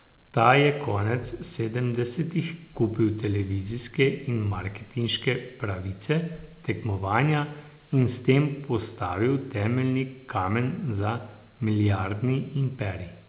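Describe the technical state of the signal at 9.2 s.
At 9.2 s the audio is intact, with only the ordinary narrowband character of the call path, which carries nothing above 4 kHz.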